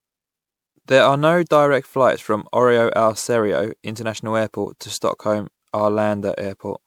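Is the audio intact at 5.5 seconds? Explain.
No. At 5.5 seconds the speech carries the generation loss that runs through the whole clip. It has a swirly, hollow, smeared quality, with softened attacks, worse than one MP3 pass near 128 kbit/s would give. That's likely from about seven re-encodes, each stacking fresh quantisation noise and spectral holes.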